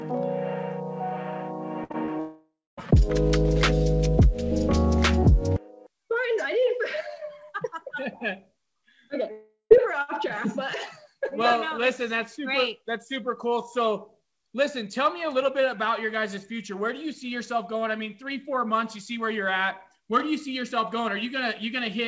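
At 1.84 s a burst of packet loss begins. For about 60 ms, until 1.92 s, the receiver carries the last sound forward and turns it down, a fading buzz or hiss. Unlike the blips that follow, it is long enough to hear as a held sound.

Right after it, from 1.92 to 1.96 s and again from 2.06 to 2.10 s, comes short concealed packet loss. Each time about 20 ms is patched and blended back in, giving only a brief smear or wobble rather than an audible held tone.

From 2.20 to 2.79 s the sound stretches into a fading buzz or hiss, then goes silent for about 240 ms before returning with roughly 0.58 s missing. The same happens from 9.31 to 9.72 s, with about 0.4 s lost and 120 ms of silence. This is likely a long network dropout, set apart from the burst by the silence after the fill. Throughout, the G.722 call path leaves nothing above 8 kHz.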